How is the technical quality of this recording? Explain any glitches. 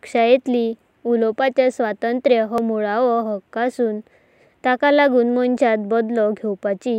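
The recording has two brief skips in the speech, at 2.58 s and 5.57 s. They are likely audio missing between chunks: the recorder processes sound in blocks about 3 seconds long and drops a sliver, around 10 ms, each time it closes one block and opens the next. The audio on either side is butted together with no gap, so each spot is heard as a tiny jump where the speech lurches forward.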